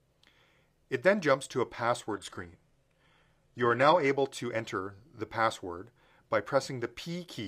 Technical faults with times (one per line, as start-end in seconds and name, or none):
2.11-4.11 adaptive stream at a lower bitrate